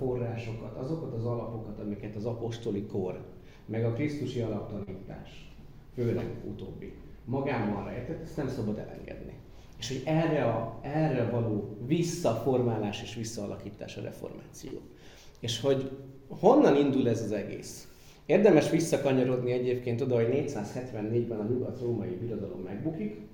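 At 4.83 to 4.89 s there is a short stall from a late packet. A packet arrived late and the jitter buffer ran dry. The receiver held the last sound for 34 ms, then resumed where it stopped. Nothing is lost, but the sound drags with a faint buzz.

From 10.10 to 10.73 s a jitter buffer speed-up follows. The buffer had grown too deep. Tiny pitch-period slices were cut out repeatedly, about 50 ms in total. Playback runs at 106% with unchanged pitch and sounds slightly rushed.

At 14.67 to 14.83 s a second late-packet stall holds the sound for 38 ms. Nothing is missing.

From 20.79 to 21.60 s another speed-up at 106% trims about 70 ms, with the same hurried feel.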